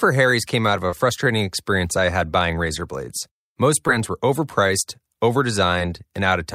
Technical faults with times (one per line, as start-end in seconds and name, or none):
0.90-0.93 short concealed packet loss
3.87 short concealed packet loss